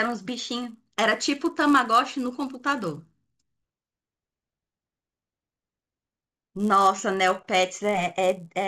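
Resampler restarted on every block, throughout this speech clip: a buzz at 100 Hz rides under the speech and drops out in the pauses. Each 10 ms block, which fits a 16 kHz to 48 kHz conversion, was resampled in isolation, leaving a small error at every block edge.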